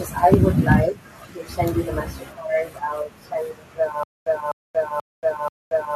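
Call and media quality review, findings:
Microphone overload, 0.33–0.35 s: harsh crackle on a speech peak, flattened tops about 4 dB past the converter's limit, with a large share of samples clipped. Likely input gain set too high, driving the converter into its limit.

Microphone overload, 0.71–0.75 s: milder distortion on a loud syllable, about 2 dB over, with only a small fraction of samples clipped. Same mechanism: peaks cut flat at converter ceiling.

Microphone volume stepped down, 0.34 s: abrupt drop of about 2 dB in speech and background together, landing right on the first distorted peak. Likely call software's automatic gain control reacting to clipping by cutting device input level in one step.

Stutter with silent gaps, 4.03 s to end: a 0.25 s fragment repeats four times, each followed by 0.23 s of digital silence, giving a 0.48 s cycle. Likely stream or player stall, replaying the last buffer on each retry then running empty. 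The intended audio for this span is lost.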